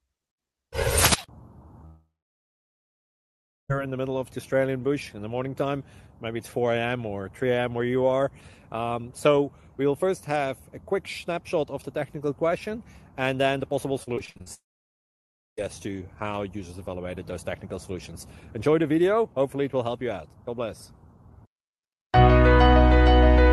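From 1.85 to 3.71 s there is a long network dropout, likely from a network outage. Roughly 1.8 s of audio never arrives. The receiver briefly stretches the last sound into a fading buzz, then leaves about 1.6 s of near-silence before the sound resumes with that stretch missing. On a waveform this shows as a short tapering tail followed by a flat line. On a spectrogram it is a smeared band that fades into an empty block across all frequencies.

From 14.03 to 14.48 s, repeated packet loss gives a choppy, robotic quality. Seven separate holes, the longest 59 ms, are each patched by repeating the preceding sound, so nearly half of this 0.45 s span is concealment rather than real audio. The spectrogram shows a stutter of short, smeared, horizontally stretched slices with abrupt edges. The waveform looks chopped, with repeated near-identical cycles.

Almost immediately afterwards, from 14.54 to 15.59 s, a second long network dropout follows, again likely from a network outage. 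About 1 s is lost. After a brief fading fill, roughly 0.97 s of silence remains before the audio returns. It appears as another flat gap in the waveform and a blank column on the spectrogram, which, like the rest of the clip, tops out near 12 kHz from the call codec.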